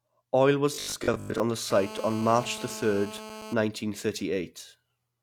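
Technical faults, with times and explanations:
0.74–1.40 s, robotic sound from repeated short buffers: the speech turns into a rigid, metallic drone pitched at 50 Hz, which fits a repeated slice about 20 ms long. Roughly half of what is heard is repetition, with the skipped stretches lost. The likely cause is audio arriving too slowly, so the playback loops its last buffer. Unlike a phone buzz, the tone still tracks the rough shape of the speech rather than sitting apart from it.
1.71–3.54 s, GSM phone buzz: a hard, raspy buzz at 217 Hz, rich in harmonics and about 14 dB below the speech, holds steady for the whole stretch. A 2G handset on a call transmits in bursts at that rate, and the audio circuitry rectifies the radio pulses into sound. Unlike the robotic buffer fault, this buzz ignores the speech entirely, with a constant pitch and level regardless of what is being said.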